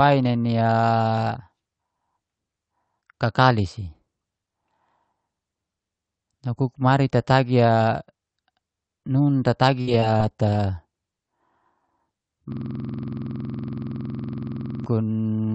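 From 9.81 to 10.55 s, repeated packet loss strikes the call stream: four gaps, the longest 56 ms, are patched by stretching the preceding sound, rebuilding around 150 ms in total. The speech turns choppy, with small pieces missing.

From 12.52 to 14.86 s, a system hang loop sets in. The machine stalls while the output hardware keeps replaying one 46.44 ms slice, which fits a 2048-sample buffer, roughly 50 times over. This produces a rapid stuttering buzz at 21.5 Hz, all of it carried through the Opus call path's 8 kHz band.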